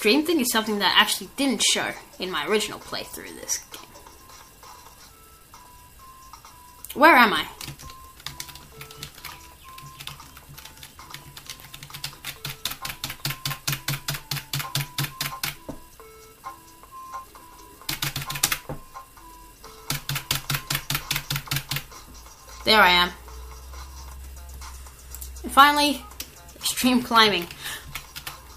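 CD scratch ticks occur from 4.67 to 6.38 s and again from 10.63 to 12.33 s. A blemish defeats error correction each revolution, giving roughly five brief ticks per second.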